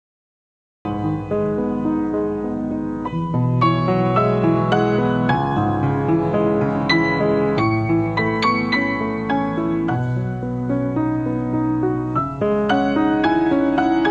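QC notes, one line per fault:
0.00–0.85 s, cut-off start: the clip opens on dead digital silence for the first 0.85 s, then the sound appears abruptly at 0.85 s already in progress, with no attack or fade-in to lead into it. The sudden step from nothing to ongoing sound means the audio begins mid-sound. Capture or streaming began late, so the opening portion was never recorded and the waveform jumps straight from zero into ongoing signal.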